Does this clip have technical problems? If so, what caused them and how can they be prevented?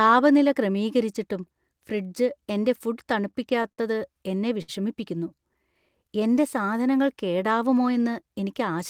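Yes, there are four network-timing problems in this speech clip.

Between 3.09 and 3.80 s there's repeated stalls (stutter). Packets kept showing up late, so the jitter buffer ran dry five times. Each time the receiver held the last sound until audio arrived, adding 105 ms in total, with the longest gap 59 ms and about 15% of that stretch filled in. Nothing is lost, but the speech drags and stumbles. A steadier network path or a slightly deeper jitter buffer would stop it.

At 4.62 to 4.70 s there's a short stall from a late packet. A packet wasn't there on time, so the receiver stretched the previous sound for 62 ms and picked up where it left off, leaving the delay 62 ms higher. Prioritising voice traffic (QoS) would help avoid it.

From 5.35 to 5.73 s you get a jitter buffer slow-down. The buffer was building a reserve by repeating tiny pitch-period chunks, so the speech runs at about 90% speed, 45 ms longer, at unchanged pitch. 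Reducing network jitter means the buffer won't need to refill like this.

From 7.73 to 8.23 s there's a jitter buffer speed-up. The buffer held more than its target, so the receiver trimmed out short pitch-period pieces, around 50 ms in all, and the speech runs at about 110% speed. Avoiding bursty packet delivery would keep this from happening.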